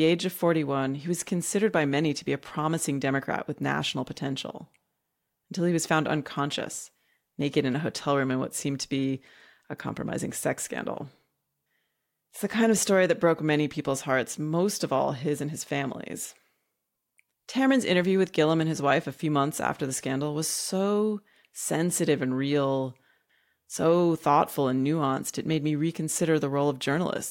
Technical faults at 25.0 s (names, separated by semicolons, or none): none